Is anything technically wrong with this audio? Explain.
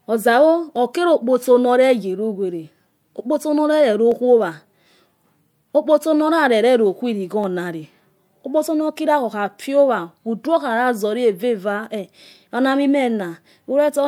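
Yes. Four sharp clicks interrupt the speech, at 0.76 s, 4.12 s, 7.44 s just after "okpotso norarerero khuwiri", and 9.63 s. Each is a single tick with a thin vertical line across the spectrum. The likely cause is dropped samples. A tiny stretch of the stream, a fraction of a millisecond, goes missing. The waveform then jumps straight to a later value. That step makes the click. Nothing audible is lost.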